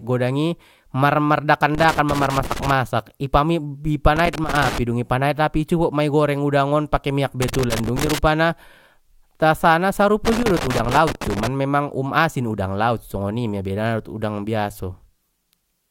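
Loose connector crackle breaks into the speech four times: 1.75–2.72 s before "i pam", 4.16–4.78 s, 7.42–8.18 s after "udang on pake miyak", and 10.25–11.47 s before "memang um asin udang". A worn contact is making and breaking, chopping the signal into irregular scratchy bursts. On the waveform these show as jagged dropouts and spikes, and on a spectrogram as ragged broadband vertical streaks.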